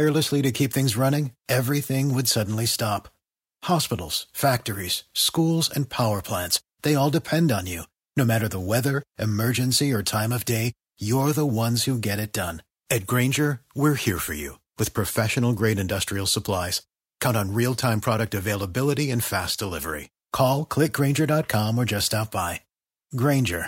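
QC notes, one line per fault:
No faults turned up anywhere in this one, so there's nothing to log for it.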